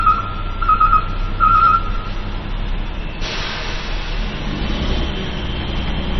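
From start to finish the sound is dull and watery: nothing above 5.9 kHz, with weak detail swirling in and out and transients smeared. That's likely heavy MP3 compression, the encoder starving for bits in a way that fits roughly 24 kbps.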